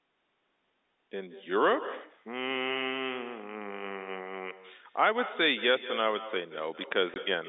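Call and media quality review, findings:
Echo with no canceller, throughout: every phrase trailed by a quieter, thinner copy roughly 150 ms behind, about 14 dB below the direct sound. Probable component: far-end loudspeaker and microphone with no echo canceller. The far microphone captures playback and returns it after the network round trip.

Packet loss filled with silence, 7.14 to 7.16 s: a 20 ms hole cut into the sound with hard edges. This fits a single lost 20 ms packet. Probable component: receiver jitter buffer or concealment stage, which inserts silence instead of concealing the gap. The loss is heard within the 200 Hz to 3.7 kHz G.711 telephone band.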